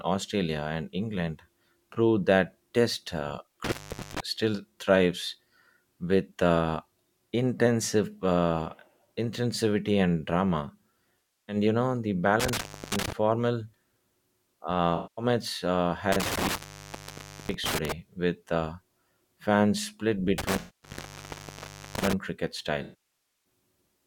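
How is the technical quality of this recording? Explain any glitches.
The speech recording is degraded by two recurring faults: a loose connection cutting the signal, and dropped AAC frames that the decoder patches over.

Intermittent contact occurs at 3.64–4.20 s, 12.40–13.12 s, 16.12–17.92 s and 20.38–22.13 s, with the line open for 0.42 s, 0.31 s, 0.94 s and 1.40 s respectively. A loose cable or plug momentarily breaks the circuit. Sound drops out to faint hiss, with crackle at each edge.

AAC frame loss with concealment appears at 11.19–11.56 s, 14.96–15.25 s, 20.59–20.90 s and 22.83–23.23 s, covering 0.30 s, 0.21 s, 0.23 s and 0.62 s. The decoder rebuilds missing frames from the last good spectrum, producing smeared, noisy or phasey patches in place of clean audio.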